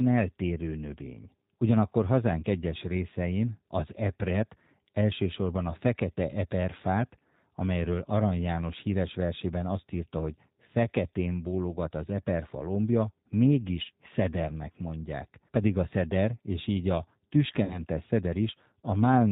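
Speech runs throughout with a slightly rough, synthetic edge and nothing audible above 4 kHz, so consonants lose their crispness and any background warbles. That is the G.729 codec, and the damage is plainly audible. The codec rebuilds each 10 ms frame from a vocal tract filter, a pitch predictor and a handful of pulses rather than the actual waveform, which fits the 8 kbit/s G.729A variant. At 17.64 s, right after "szeder és így a", the sound smears into a buzzy tone or coloured noise that fades, and stays weak and distorted until about 17.85 s. This is VoIP packet loss concealed by the speech codec. Roughly 60 ms of audio, which fits two lost packets, was never received, so the decoder extended its last pitch and filter at falling gain. Because each frame builds on the previous one, the distortion lingers for tens of milliseconds or more after real packets return.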